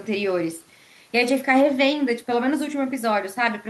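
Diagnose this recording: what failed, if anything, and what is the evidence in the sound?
Nothing failed; no fault is audible anywhere in the recording.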